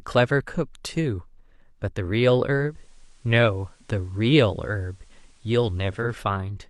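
From 2.57 s to 6.18 s, faint hiss creeps in and the level shifts by about 1 dB, easing over in 278 ms each way. This is digital radio blending to analogue: the receiver lost digital reception and crossfaded to the station's FM broadcast, then back.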